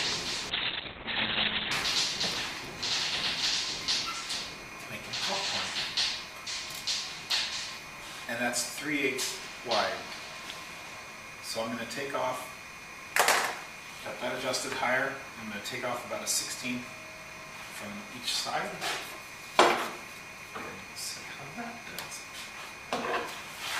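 From 0.51 to 1.77 s there is a call bitrate drop. The sound turns rough and muffled, with the top end cut near 4 kHz for about 1.2 s. The bandwidth estimate collapsed, and the coarse coding points to a fall from 48 to 6 kbps.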